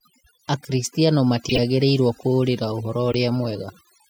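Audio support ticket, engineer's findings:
Background pulled to near silence with twinkling specks in the gaps. Probable component: denoiser, overdone noise removal. Bands near the noise estimate are driven down hard, taking quiet speech detail with them; residue flickers as isolated tones.

Loud artifact, 1.49–1.59 s, error peak around -5 dBFS. Probable component: decoder, corrupt frame decoded. Damaged bits played through, energy landing at wrong frequencies. Duration suggests a short run of several bad frames.

Shorter, quieter artifact, 3.12–3.15 s. Same corrupt-frame mechanism, lower error level.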